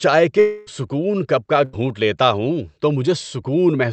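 From 0.39 to 0.69 s, a long network dropout likely stopped the audio. The receiver stretched the last sound into a fading buzz or hiss for about 0.27 s, and roughly 280 ms is lost before "کپ کا".

At 1.65 to 1.75 s, a burst of packet loss left an 80 ms gap between "کپ کا" and "لیتا ہوں تو", filled by a briefly held, fading sound.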